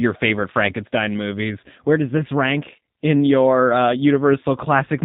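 It's a speech clip carried through a G.729 codec for its whole length, which fits the 8 kbit/s G.729A variant. Everything above 4 kHz is missing, so it sounds boxed-in, and the speech rebuilt from a filter plus a few pulses per frame comes out rough and faintly synthetic. The codec damage is plainly audible.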